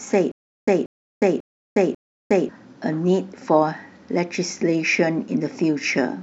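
From 0.32 to 2.49 s the speech falls into a stutter with silent gaps: a 185 ms fragment repeats four times every 544 ms, separated by 359 ms of dead silence, likely a stalled stream retrying.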